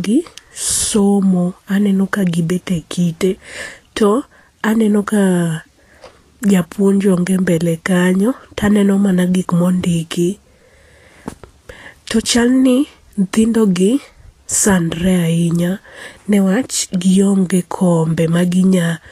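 Vorbis compression runs throughout: treble stops near 14.2 kHz, and coarsely quantised detail turns to grainy hiss, roughening tones and blurring attacks, likely from a low bitrate around 36 kbps.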